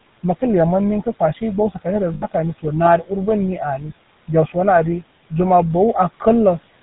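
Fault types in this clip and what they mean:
GSM full-rate codec: The speech passed through the original GSM coder, which models the vocal tract, drives it with sparse regular pulses and cuts everything above 4 kHz, consistent with a 13 kbps full-rate stream. The whole clip sounds plainly buzzy, gravelly and band-limited.
Lost GSM frames: Between about 2.14 and 2.25 s, 80 ms of coded audio, which fits four 20 ms frames, never arrived intact, so the decoder repeated the last good frame. The sound freezes there into a brief rough, metallic ring.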